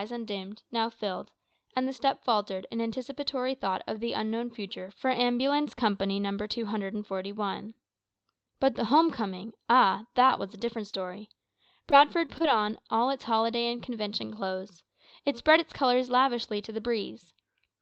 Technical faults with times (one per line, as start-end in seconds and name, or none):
10.27-10.31 short concealed packet loss
10.91-10.95 short concealed packet loss
11.91-12.46 repeated packet loss (robotic sound)